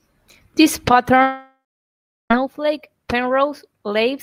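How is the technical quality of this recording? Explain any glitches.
The recording has one serious break. From 1.22 to 2.31 s, the speech stretches into a fading buzz, falls to about 0.72 s of silence, then resumes with roughly a second missing. This is likely a long network dropout, with the receiver padding the gap.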